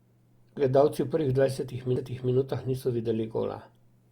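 At 1.96 s the speech has a CD skip. The laser has jumped to a different turn of the disc's spiral. Playback goes silent for only a few milliseconds, heard as a tick, then carries on from another point in the recording.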